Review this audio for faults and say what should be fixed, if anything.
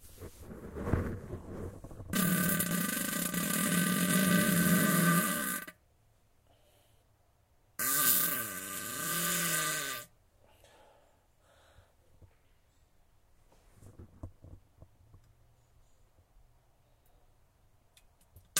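No faults turn up in this audio, so nothing needs to be fixed.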